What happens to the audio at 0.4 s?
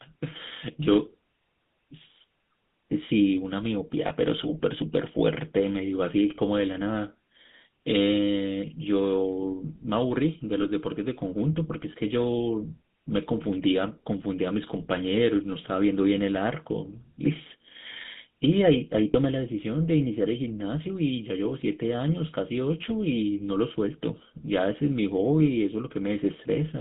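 At 0.4 s the speech carries GSM full-rate codec damage, present throughout the clip. The voice is rebuilt from a vocal-tract filter fed by coarse, regularly spaced pulses, giving a buzzy, gravelly roughness. A spectrogram shows a hard ceiling near 3.7 kHz and little below 150 Hz.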